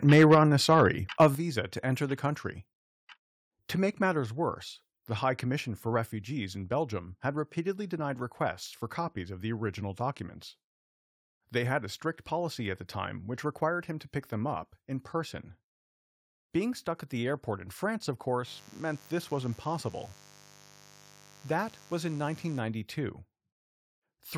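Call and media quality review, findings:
Call and media quality review, findings:

Microphone overload at 0.07–0.44 s, 0.71–0.81 s and 1.2–1.26 s. Harsh, crackly edges on the loudest syllables. Input driven about 7, 2 and 4 dB past the converter's limit. Up to around a tenth of samples flattened. Likely mic input gain set too high, so the converter clips the waveform tops.

Microphone volume stepped down at 0.35, 1.35, 4.2 and 6.03 s. Sudden level drops of about 3, 7, 2 and 2 dB, hitting speech and background together. The 1.35 s step falls just before "to enter", and the 4.2 s step just before "worse the". Likely automatic gain control in the call software, reacting to a too-loud or clipping mic by cutting device input volume.

Mains buzz, 18.43–22.62 s. Steady, raspy buzz roughly 25 dB below the speech. It is built on 50 Hz, with harmonics reaching into the kHz range. The probable source is a dimmer, a rectifier or a missing shield letting switching spikes in twice per mains cycle.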